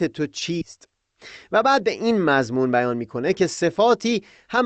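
A skip ahead at 0.61 s drops about a second of speech. The receiver discarded that stretch, either in transit or when its jitter buffer overflowed, while later audio was already queued, so playback leaps forward with no gap at all. The speech before the cut is butted almost directly against the speech after it, and because nothing fills the missing time, the sentence seems to lose a chunk mid-flow.

A jitter buffer speed-up follows from 1.59 s to 4.64 s. After the jump, the buffer was still holding more audio than its target, so the receiver trimmed it down by snipping out short pieces lasting one or a few pitch periods, over and over, removing around a fifth of a second in total. The speech runs at 107% of its normal rate with the pitch unchanged, and it sounds slightly hurried through to the end. Under both faults, the call codec's band limit at 8 kHz is audible as a lack of top-end air.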